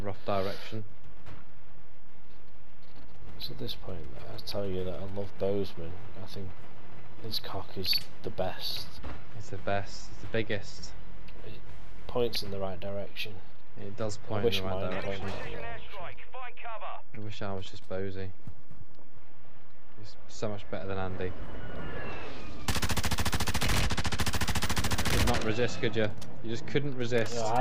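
A DC offset runs through the whole recording, shifting the waveform away from zero by a constant of about -25 dBFS. It is inaudible as such, but it eats into headroom and appears as steady energy at 0 Hz, the bottom of the spectrum.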